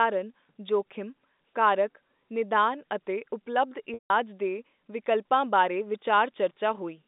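Right after "ਕਾਰਕ ਨਿਦਾਨ ਅਤੇ ਉਪਲਬਧ", from 3.94 to 4.10 s, packet loss with pitch repetition cuts out about 160 ms of speech, which fits eight 20 ms packets. The receiver loops the last pitch period, so a brief buzzy hold sounds before fading to silence, and the speech returns through a short cross-fade. On a waveform, identical repeating cycles shrink to a flat gap. A spectrogram shows frozen harmonic lines fading out, all within the G.711 telephone band below 4 kHz.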